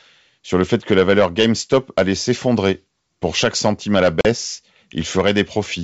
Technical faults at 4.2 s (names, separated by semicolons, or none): packet loss on an ADPCM call